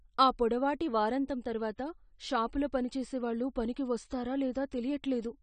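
Throughout, the speech is dull and smeared, with fizzy sibilants and nothing above 9 kHz on a spectrogram, a hard ceiling, likely from low-bitrate AAC compression.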